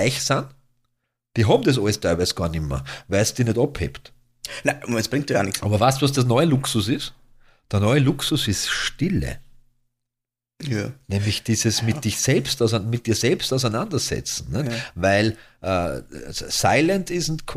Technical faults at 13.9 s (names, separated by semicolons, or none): none